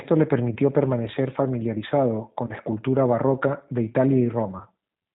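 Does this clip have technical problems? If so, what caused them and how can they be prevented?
Yes. The whole clip carries plainly audible G.729 codec damage: speech is rebuilt from a vocal tract filter, a pitch predictor and a few pulses per short frame, so it sounds rough and slightly synthetic, consistent with an 8 kbit/s G.729 stream. On a spectrogram the energy stops flat at 4 kHz, and harmonics look smeared and grainy rather than clean. Using a wideband codec such as G.722 or Opus at a higher bitrate would prevent this.

VoIP packet loss concealed by the speech codec appears three times, at 0.54–0.57 s, 2.47–2.52 s and 4.58–4.63 s. Each gap covers about 20 ms of lost audio, which fits a single lost packet. The decoder fills it by repeating its last pitch and filter at falling gain, giving a brief, fading smear, and the following frames stay weak or distorted while the decoder recovers. 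A spectrogram shows a short stretch of frozen, flat harmonics dimming out, and the waveform dips in level there. A jitter buffer, forward error correction and a less congested network path would prevent it.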